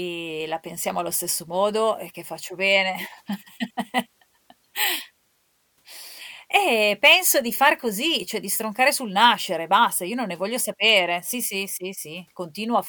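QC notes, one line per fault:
No faults found.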